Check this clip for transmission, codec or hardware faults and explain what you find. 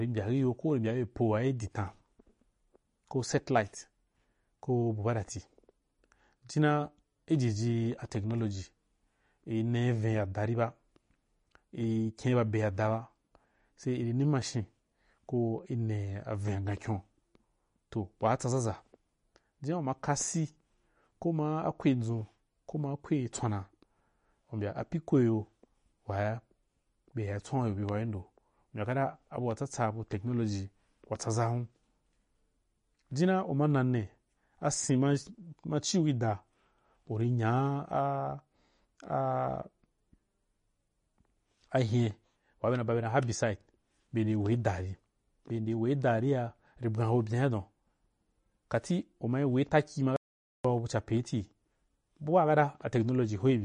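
Two faults are present: codec damage across the whole speech clip and one brief cut to silence near the end.

MP3 compression is the likely cause of the damage heard throughout. Nothing sounds above 10.6 kHz, and the artefacts are plainly audible: a watery, swirling texture and chirpy sibilants, which fits a low bitrate of roughly 40 kbps. The encoder, short of bits, discards the treble at a fixed ceiling and drops weak frequency components that then flicker on and off between frames. A spectrogram shows a hard flat edge at 10.6 kHz and speckled, patchy holes in the upper bands.

An audio dropout to silence runs from 50.16 to 50.65 s, about 0.48 s long. The input was likely lost while writing continued, so silence was recorded. The speech stops abruptly and resumes mid-flow, with no room tone in between, and whatever was said during that half-second is gone. On the waveform it is a flat, silent line. 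On the spectrogram it is a clean vertical blank stripe across every frequency.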